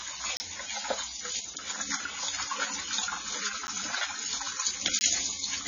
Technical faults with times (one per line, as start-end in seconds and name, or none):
0.00-5.67 AAC compression
0.37-0.40 block of digital silence
3.67 block of digital silence
4.99 block of digital silence